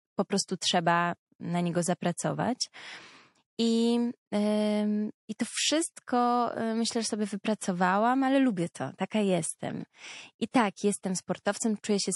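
The whole clip carries MP3 compression, most likely from an encoder starved of bits, and the damage is plainly audible. The sound fits a low rate around 48 kbps. The encoder has let weak frequency lines blink on and off between frames. The speech therefore sounds watery and swirly, with metallic chirps on s sounds and softened consonant attacks.

Pre-echo appears three times, from 7.59 to 7.61 s, 10.51 to 10.54 s, and 11.43 to 11.46 s. The codec spread quantisation noise across a long transform block, about 48 ms, and never seems to have switched to short blocks for these sharp onsets. The noise meant for each loud attack leaked into the quiet moment before it. The result is a hiss lasting about 27 to 30 ms just ahead of each onset, rising about 24, 25 and 17 dB respectively, and each attack sounds smeared rather than crisp.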